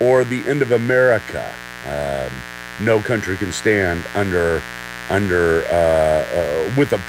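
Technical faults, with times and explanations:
Throughout, mains buzz: sharp switching spikes from the 60 Hz power supply are leaking into the signal path, arriving twice per mains cycle, so the interference repeats 120 times a second and carries a dense ladder of harmonics reaching up into the kilohertz range. That spiky, harmonic-rich content is why it sounds as a steady, raspy buzz rather than a smooth hum. It sits roughly 15 dB below the speech.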